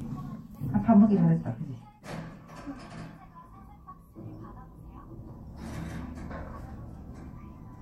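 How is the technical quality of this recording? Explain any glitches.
There is one glitch: a tiny skip at 5.30 s in this recording of sounds. It comes from an overlap between stream segments. Where two segments' time stamps overlapped, the player cut a few milliseconds of audio that wasn't actually repeated, so the waveform jumps abruptly. The stream uses 6-second segments.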